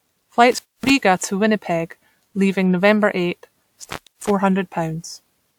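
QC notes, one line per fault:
Throughout, generation loss: the sound has a swirly, hollow smear and softened attacks, more than a clean encode at this quality would give, with nothing above 20.1 kHz. It's likely a few rounds of lossy re-encoding, something like WMA at 128 kbit/s, each pass stacking fresh quantisation noise.
0.52–0.90 s and 3.82–4.31 s, intermittent contact: the signal drops out twice with a crackle at each edge, leaving faint hiss for about 250 ms the first time and about 300 ms the second. That's a loose cable or plug briefly opening the line.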